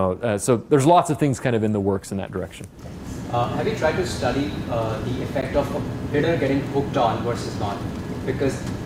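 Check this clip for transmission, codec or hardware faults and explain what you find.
There's one fault here, a gap between stream segments at 5.41 s. Two segments were timestamped with roughly 12 ms of daylight between them, and the player simply filled that hole with silence. You hear a tiny, hard-edged dropout, a quick tick of nothing where the sound cuts off and snaps back. Nothing is actually lost; the audio just gets pushed later by that amount. It lines up with a 6-second segment length.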